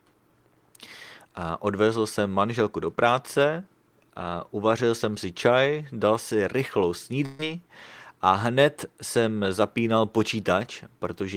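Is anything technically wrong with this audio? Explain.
Yes, there's one burst of packet loss, from about 7.25 to 7.41 s, right after "čaj dal si rychlou". Packets went missing or showed up too late, so the receiver covered a gap of about 134 ms by carrying the last bit of sound forward and fading it down, with no true silence. When the speech picks back up, roughly 140 ms of it has been skipped, so you hear a small jump.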